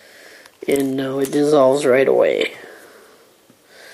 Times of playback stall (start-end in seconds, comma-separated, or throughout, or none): none